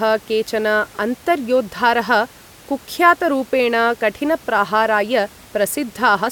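No technical faults can be heard anywhere in the speech. A low background noise from the room sits about 26 dB below the speech, and it belongs to the recording itself rather than to the system.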